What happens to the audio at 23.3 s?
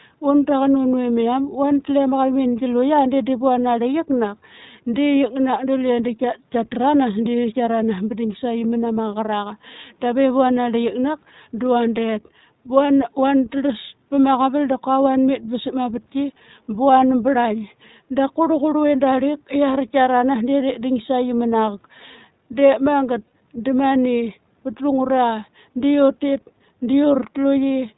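At 23.28 to 23.32 s there are lost iLBC frames. For about 40 ms, which fits two missing 20 ms frames, the decoder repeats the last pitch cycle blended with noise, giving a brief buzzy, held vowel. A spectrogram shows flat, smeared harmonics; the waveform shows repeating, near-identical cycles overlaid with noise.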